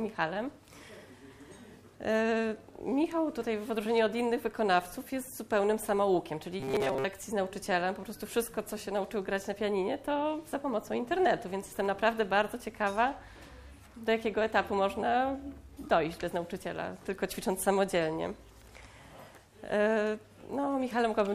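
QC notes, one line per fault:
6.60–7.04 s, robotic sound from repeated short buffers: the audio turns into a rigid, metallic buzz pitched at 134 Hz, though its rough outline still follows the underlying sound. The likely cause is new audio arriving too seldom, so a short slice, about 7.5 ms to match that pitch, was replayed to fill most of the stretch. Unlike mains hum, this buzz appears only here and rises and falls with the sound.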